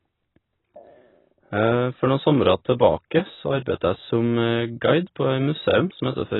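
Throughout the speech, a low-bitrate encoder has likely discarded most of the spectrum, which points to AAC compression at around 16 kbps. Nothing survives above 4 kHz, so the sound is dull and muffled, with heavy smearing and a warbling, fizzy texture on sibilants.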